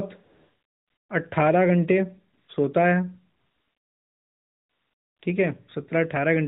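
AMR comfort noise fills three pauses, at 0.24 to 1.10 s, 2.34 to 2.48 s and 3.40 to 5.22 s. The phone stopped sending speech frames, so the real background gives way to a smooth, steady synthetic hiss that switches in and out at each boundary.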